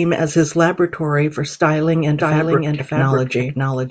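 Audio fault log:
2.20 s to end: doubled audio track. From 2.20 s a second, full-band copy of the speech sits roughly 0.7 s behind the original at about 5 dB lower, cutting in abruptly and running to the end, likely from a second capture path or an edit leaving two out-of-step copies. It lacks decay or room colour, so it sounds like overlapping talk, not echo. A spectrogram shows the same harmonic patterns repeated at a fixed offset; the waveform shows a sudden envelope thickening at 2.20 s.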